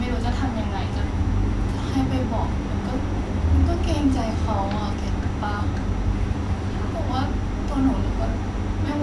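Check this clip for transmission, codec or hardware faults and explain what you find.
Nothing to flag: no transmission, codec or hardware faults can be heard anywhere in the speech.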